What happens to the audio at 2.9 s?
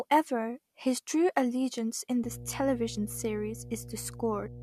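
At 2.9 s a steady, low 60 Hz drone sits under the speech, at around 15 dB below it. This is mains hum, and it begins at 2.24 s, right after "allegiance in", continuing to the end of the clip at 4.63 s. It arises when the power-line frequency leaks into the signal path, through a ground loop between connected equipment or magnetic coupling from a nearby transformer.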